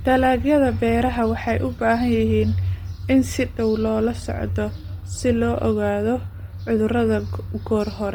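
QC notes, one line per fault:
Throughout, Bluetooth LC3 compression: speech carries a heavy breathy, grainy edge where upper detail is replaced by noise fill rather than cut off, with energy reaching 20.2 kHz. The likely cause is low-rate LC3, fitting 32 kbps with 10 ms frames.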